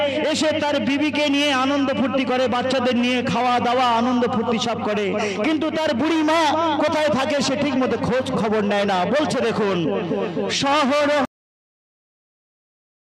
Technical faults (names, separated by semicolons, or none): cut-off end